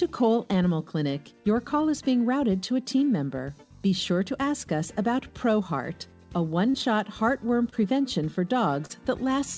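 Around 6.70 to 6.76 s there's a short concealed packet loss. About 40 ms of audio didn't arrive in time, so the receiver papered over it by stretching the last bit of sound and fading back in. You hear a quick smear. The same happens at 7.70 to 7.74 s with a roughly 20 ms gap, and again at 8.86 to 8.91 s with about 40 ms lost. The call path itself tops out at 8 kHz, which fits G.722.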